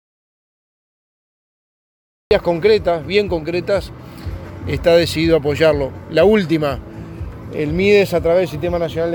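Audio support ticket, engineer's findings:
Audio dropout to silence, 0.00 to 2.31 s: already dead at file start, silent, no room tone. Likely input link or device lost while recorder kept writing.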